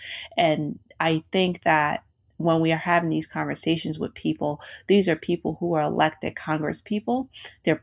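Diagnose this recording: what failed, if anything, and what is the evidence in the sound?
Nothing in the chain seems to have gone wrong here, so there's no failure to diagnose in this speech recording.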